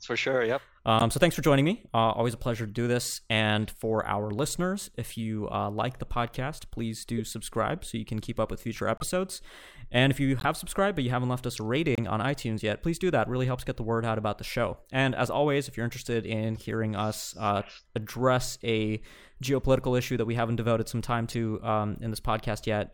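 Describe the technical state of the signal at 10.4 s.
At 10.39 to 10.45 s a corrupt frame is decoded: flipped bits in roughly two compressed frames were played anyway, so misread gains and codes throw energy into the wrong frequencies, producing a brief spurious burst peaking around -20 dBFS.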